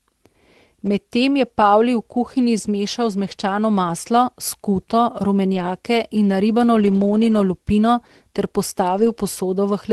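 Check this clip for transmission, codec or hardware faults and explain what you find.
The speech shows three short stretches of lost packet rebuilt from error correction. They occur at 5.53–5.63 s, at 6.79–7.09 s ending just before "lupino ter", and at 8.97–9.11 s starting just after "lupino ter". Their lengths fit about three, eight and four lost 20 ms packets. Each missing packet was replaced by the coarse backup copy carried in the following packet, so the sound keeps going but turns briefly grainier and noisier. No gap, dropout, or smeared, buzzy stretching like concealment guesswork can be heard, which separates these from plain packet loss. The call path's coding stops near 12 kHz.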